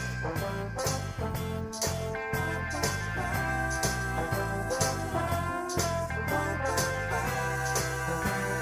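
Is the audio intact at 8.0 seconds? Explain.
Yes, at 8.0 seconds the audio is intact, with no dropout, click, distortion or other fault to be heard there.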